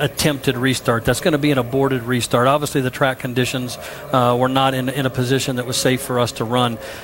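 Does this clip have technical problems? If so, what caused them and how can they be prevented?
Yes. From the start to about 4.4 s, there is low bit depth with noise shaping. A steady, thin hiss sits under the sound and gets sharply brighter toward the top of the band. The audio has been reduced to about 9 bits. The rounding error has been pushed upward in frequency rather than spread evenly. That hiss sits roughly 30 dB below the signal. To prevent it, keep at least 16 bits through processing and export.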